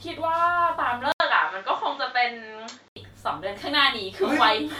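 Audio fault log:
1.12–2.96 s, input switched to a poorer device: after a gap of about 80 ms the sound turns duller and narrower, with nothing above 7.6 kHz, a level shift of a few decibels and a faint new background noise about 45 dB down, then clears again at 2.96 s. The likely cause is a change to a different microphone, and the silence at the switch, the new noise and the level change set it apart from a plain low-pass filter or codec bandwidth drop.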